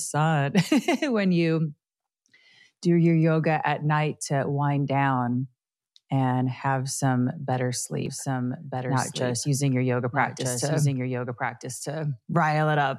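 From 8.06 s, right after "and have some better", a doubled audio track kicks in and runs to the end: a second copy, about 5 dB quieter, trails about a second and a half behind, dry and full-band. It's likely a slower capture path recording everything twice.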